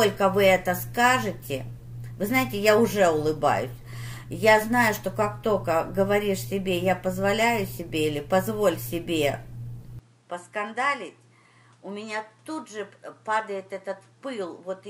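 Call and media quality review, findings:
From 9.99 s to end: band cut above 11.4 kHz, level down around 5 dB, new noise floor about 35 dB below signal, no gap. Likely input switched to a poorer device.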